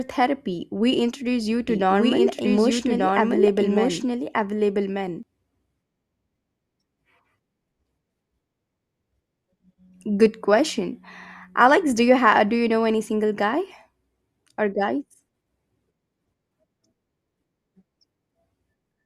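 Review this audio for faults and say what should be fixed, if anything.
A doubled audio track runs from 1.69 s to 5.23 s, starting just after "introduce you". The speech is heard twice. A second full-band copy trails the first by about one second, at roughly the same level. It has no decay or room colour, and it starts and stops abruptly. This is likely a second capture through a slower path, or an edit leaving two copies out of step. Prevent it by monitoring only one input path and checking edit overlaps.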